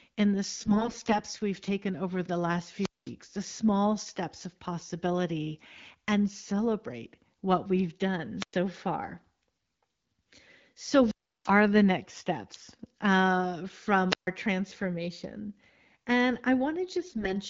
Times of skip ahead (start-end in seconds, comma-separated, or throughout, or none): none